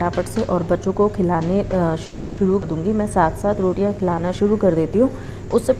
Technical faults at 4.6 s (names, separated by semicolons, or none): jitter buffer slow-down